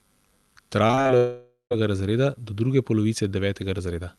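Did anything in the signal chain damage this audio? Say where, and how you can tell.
Yes. Repeated packet loss (robotic sound) in the network: 0.87 to 1.11 s turns choppy. Five short holes, longest 37 ms, are patched by stretching prior sound.

A long network dropout is the likely cause at 1.17 to 1.73 s. The sound smears into a fading buzz, then about 140 ms of silence. Audio returns with that stretch missing.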